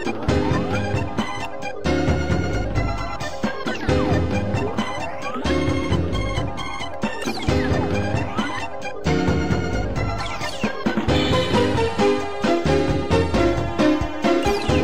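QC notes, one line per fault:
0.35–14.63 s, clock drift buffer slips: click every 1.1 s, likely a 150 ppm clock mismatch slipping a few samples; thin vertical spectrogram lines.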